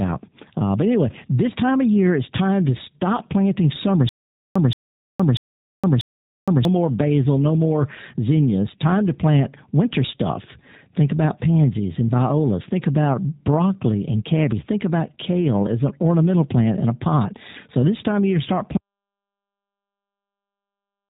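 Throughout, the speech has passed through a G.729 codec. It rebuilds each 10 ms frame from a vocal-tract filter, a pitch predictor and a handful of pulses rather than sending the waveform itself. Nothing above about 3.8 kHz survives, so the voice is narrow and boxy. The plainly audible coding damage gives it a rough, slightly synthetic grain, which fits the 8 kbit/s G.729A variant used in VoIP calls.

From 4.09 to 6.65 s there is a stutter with silent gaps. The likely cause is a stalled player or stream that replayed its last fragment on each retry and then ran dry. The same 175 ms burst repeats four times, each followed by about 465 ms of dead digital silence, giving an even 640 ms rhythm. The speech that should have filled that stretch never arrives.

At 18.77 s there is an audio dropout to silence. The input was likely lost while the recorder kept writing silence. The speech cuts off abruptly mid-flow, and from there to the end of the clip there is complete silence, with no room tone or background left beneath it.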